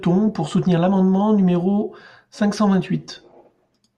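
No technical faults can be heard anywhere in it.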